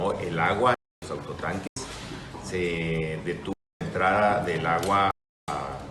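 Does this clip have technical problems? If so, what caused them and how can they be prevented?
Yes. The output buffer went unfilled, leaving blocks of digital silence at 0.74–1.02 s, 1.67–1.77 s, 3.53–3.81 s and 5.11–5.48 s. These are holes of 93 to 372 ms where the sound cuts out and back with no fade, and their lengths fit multiples of a 4096-sample buffer. A larger buffer or higher processing priority prevents this.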